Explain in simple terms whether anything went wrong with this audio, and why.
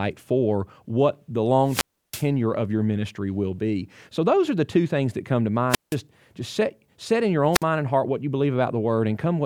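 Three wireless microphone squelch dropouts break up the speech, at 1.64 to 2.27 s, 5.69 to 5.96 s and 7.52 to 7.63 s. The radio signal weakens, hiss swells briefly, then the receiver mutes for about 0.33, 0.17 and 0.05 s. That rising hiss before each silence is what sets it apart from a clean digital cut.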